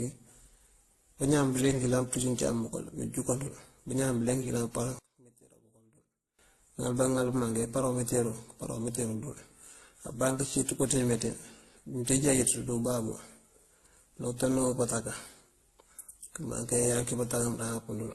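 A speech recording that carries layered compression damage from start to finish, which is most likely transcoding between lossy codecs. The different artefacts heard together point to a very low-bitrate first pass, with a later WMA-style encode adding its own artefacts on top. Nothing is present above 12.2 kHz. From 4.99 to 6.39 s the level collapses by about 28 dB, leaving a faint residue, likely the sign of one channel inverted so that the shared centre content cancels in the mono sum.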